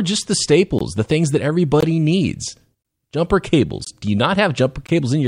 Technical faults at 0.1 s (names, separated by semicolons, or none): none